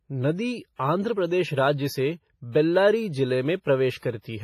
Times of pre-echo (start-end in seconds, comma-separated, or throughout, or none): 0.76-0.79, 3.61-3.66, 3.98-4.02